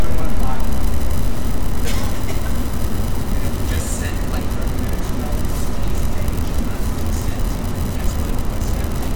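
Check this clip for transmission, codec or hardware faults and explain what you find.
Nothing here needs flagging; I listened all the way through and didn't hear any transmission, codec or hardware trouble worth pointing out.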